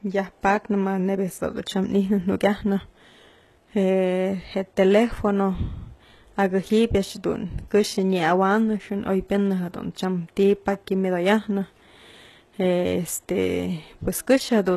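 Throughout, likely HE-AAC compression, at what sounds like about 16 kbps, rebuilds the treble from copied lower bands, leaving plainly audible damage and nothing above 12.3 kHz.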